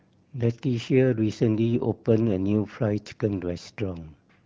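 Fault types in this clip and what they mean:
No faults found; the speech has passed through the AMR wideband (HD Voice) codec at 12.65 kbit/s with only light coding damage.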